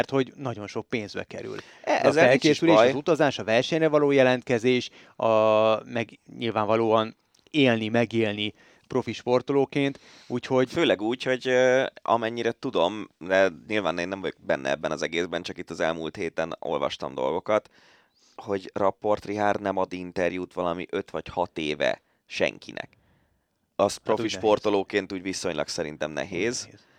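Speech recording with no technical faults to report. Nothing in the audio calls for a time or a cause.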